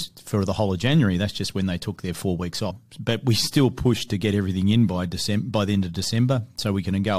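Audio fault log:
2.70 s, stream segment skipped: the speech lurches abruptly forward with a small blip, as though a stretch of the talk has vanished between one instant and the next. The likely cause is one stream segment failing to load, with playback continuing from the following segment.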